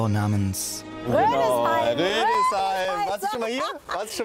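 From 1.85 s to 4.1 s, periodic USB or driver dropouts cut about ten short gaps, each roughly 4 ms of silence, every 0.25 s. A blocked bus or driver causes them. Their clockwork spacing separates them from random clicks or network packet loss.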